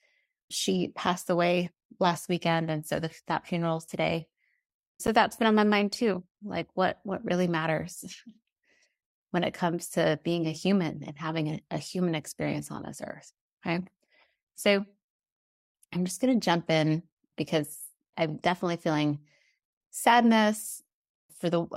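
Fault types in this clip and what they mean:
Gap between stream segments: two segment timestamps fail to meet, and the player fills the hole with silence. Nothing is lost; the sound simply resumes later. Here short dropouts occur at 1.06 s (about 5 ms, before "away last weekend"), 5.07 s (about 11 ms, before "that's been on my") and 13.09 s (about 5 ms, after "human experience on this"). These fit a 4-second segment boundary. On a waveform each is a flat stretch with abrupt edges; on a spectrogram, a thin blank vertical strip.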